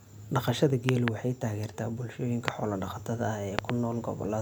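Speech clip with loud pops, double at 0.89–1.10 s before "waxay taageertaa" and 3.59–3.72 s, single at 2.48–2.50 s, roughly 20–25 dB above the speech, which continues underneath, unlike a dropout. Likely voltage spikes.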